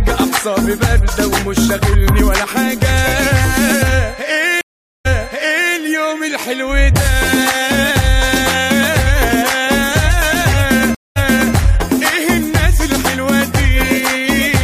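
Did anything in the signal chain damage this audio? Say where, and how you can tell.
Yes. The audio drops out at 4.61 s for about 440 ms, then returns fading in, and replays roughly 0.7 s of material already heard. At 10.95 s it happens again, with a 210 ms gap and about 0.37 s repeated. This points to a stream reconnect at the network stage: the connection failed, the player restarted its decoder mid-stream, and the server resent a burst from slightly earlier, so the restart overlaps what had already played.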